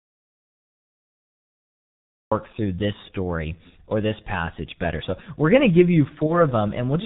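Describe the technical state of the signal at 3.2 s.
G.723.1 codec damage is present at 3.2 s, as it is across the whole clip. Heavy coding in 30 ms frames, fitting a low rate of about 6 kbit/s, strips everything above 4 kHz and tracks the voice sluggishly, so the speech sounds muffled and hoarse, with smeared consonants.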